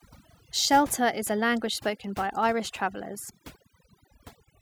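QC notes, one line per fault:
Throughout: overdone noise removal. The noise reduction was pushed too hard, so any frequency band sitting close to its noise estimate gets pulled far down or shut off, and the quieter parts of the speech disappear along with the noise. Between phrases the background falls to near silence with small twinkling specks. Those flickering tonal specks in the gaps set it apart from a simple low-pass or a noise gate.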